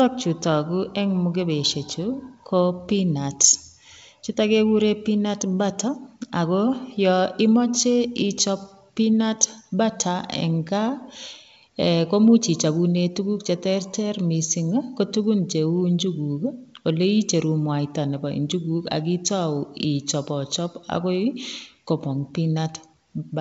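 No technical faults can be heard in this speech.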